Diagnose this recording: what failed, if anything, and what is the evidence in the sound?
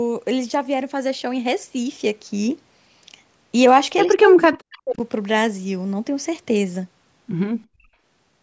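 From 4.07 to 4.99 s the speech sinks and breaks into fragments, falling by around 40 dB at its deepest, with roughly 0.7 s of that stretch affected. This is speech suppressed in double talk, at the call-processing stage. Both ends were likely talking at once, and the echo canceller, unable to tell the near talker from the loudspeaker echo, attenuated both. The same processing's band limit near 8 kHz is audible throughout.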